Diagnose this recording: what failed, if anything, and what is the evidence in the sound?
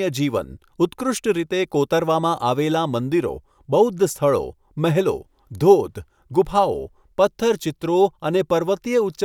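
Nothing failed here: listening along the whole chain, there's no sign of trouble anywhere in this speech recording.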